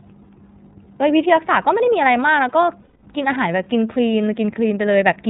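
From start to finish the speech passes through the iLBC codec, a narrowband VoIP coder with nothing above 4 kHz; a spectrogram shows a flat ceiling there. Each frame's excitation is coded separately, leaving plainly audible roughness and a slightly synthetic edge, which fits the 13.33 kbps, 30 ms-frame mode.

From 2.81 to 3.04 s come lost iLBC frames: about 210 ms, which fits seven 30 ms frames. The decoder repeats the last pitch cycle with added noise, giving a held, faintly buzzy vowel. The waveform shows repeating, decaying periods, then normal speech returns almost immediately.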